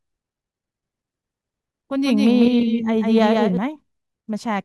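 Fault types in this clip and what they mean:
Doubled audio track: from 2.05 to 3.57 s the speech is heard twice, a full-band copy about 5 dB quieter trailing roughly 150 ms behind, likely from a second, slower capture path. Spectrograms show each syllable's pattern repeated, shifted right, starting and stopping abruptly.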